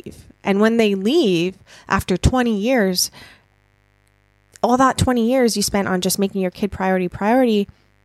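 Speech with mains buzz throughout: spikes from a dimmer, rectifier or poor shielding enter twice per 50 Hz cycle, adding a steady raspy buzz well below the speech level.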